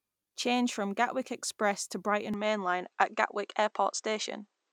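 At 2.34 s the speech changes character abruptly and stays that way to the end. Everything above 8.4 kHz disappears, so the top end sounds dull and boxy. There is no gap at the change. The level shifts by about 5 dB, and a new, faint noise floor appears roughly 55 dB below the speech. This is likely an input switched to a poorer device. The recording moved to a narrower-band device with its own tone and noise.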